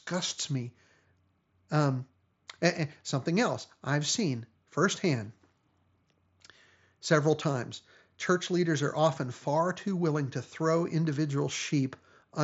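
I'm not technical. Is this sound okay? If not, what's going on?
Yes, nothing in this speech recording points to a problem. It has the sound of a Bluetooth headset using the mSBC codec, which carries the voice up to about 7.7 kHz and leaves out the very highest, airiest tones, with only a light touch of graininess on louder moments.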